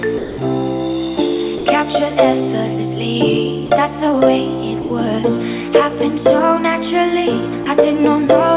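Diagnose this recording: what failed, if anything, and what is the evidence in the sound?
The failure sits in call processing. Five times, the sound gives way to steady comfort noise, then returns. This happens at 0.18 to 0.38 s, 1.58 to 1.66 s, 3.66 to 3.70 s, 4.82 to 4.90 s and 7.64 to 7.66 s. The gaps last 20 to 200 ms. The likely cause is sound dropped by the voice detector. The sender judged the sound as background and stopped transmitting. The receiver filled each gap with synthetic noise.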